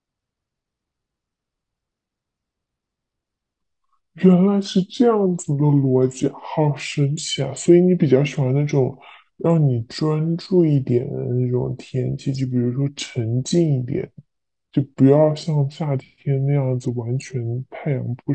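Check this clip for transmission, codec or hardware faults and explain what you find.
There's one clear fault. Throughout, it's a wrong sample rate: the speech runs at 0.69× speed and sits 6.45 semitones low, which fits 32 kHz audio played back at 22 kHz without conversion.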